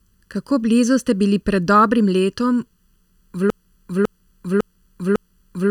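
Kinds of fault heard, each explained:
Channel delay (comb filtering): one channel arrives under a millisecond late, and summing to mono cancels shared content at evenly spaced frequencies, the first notch near 700 Hz. Throughout the speech this leaves a hollow, phasey tone with fixed spectral gaps.
Broken-record loop: from 3.50 s to the end, a 552 ms fragment repeats back to back about four times, exact each pass. The likely cause is a stalled player or stream resending its last buffer, so the speech that belonged there is lost.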